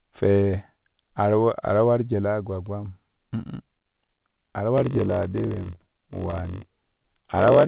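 From 4.76 s, right after "a ta", and running to the end, the audio shows a block size mismatch (padded). Each block written is shorter than the 1024-sample block the next stage reads, which fits a 1024-sample read, and the remainder is zero-filled. The repeated gaps produce a 46.9 Hz buzz, and the sound runs about 6% slow (0.938×) at roughly normal pitch. On a waveform, thin flat notches recur every 21 ms. On a spectrogram, vertical stripes appear at that spacing, with harmonics of 46.9 Hz. The band stops at 4 kHz, as expected from the G.711 mu-law call path.

Between 5.46 and 6.42 s, repeated stalls (stutter) overlap the buzz. The jitter buffer ran empty eight times, and each time the receiver stretched the last sound to bridge the wait. The longest wait was 12 ms, and about 82 ms were filled in total, roughly 9% of that stretch, with nothing lost. It is heard as a dragging, hiccuping stutter. 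A waveform shows short repeated copies of the preceding cycle, and a spectrogram shows brief horizontally smeared patches.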